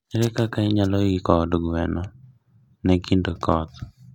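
No faults heard anywhere in this speech recording.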